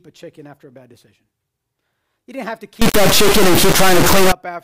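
After "didn't have to", from 2.82 to 4.32 s, the speech becomes an integer-read-as-float fault, consistent with 32-bit integer samples decoded as 32-bit float. Values slam between zero and the clipping limit, giving a deafening square-wave buzz; the waveform shows flat clipped blocks, the spectrogram dense broadband harmonics.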